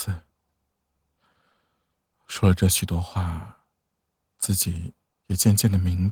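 No technical faults can be heard in the speech. The Opus voice compression runs in hybrid mode and keeps the full audio band with only light coding marks, which fits a bitrate of around 20 kbps.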